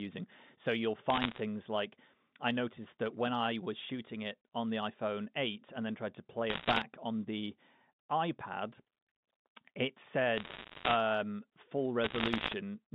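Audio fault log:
1.1–1.4 s, 6.50–6.83 s, 10.38–10.96 s, 12.04–12.54 s: bit errors on the digital phone line. Around one or two bits in a hundred are corrupted, and each flip damages a single G.711 sample, producing bursts of sharp ticks and crackle over the telephone-band speech.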